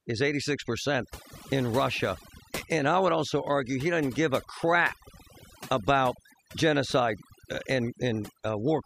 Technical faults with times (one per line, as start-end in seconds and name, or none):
0.00-8.86 overdone noise removal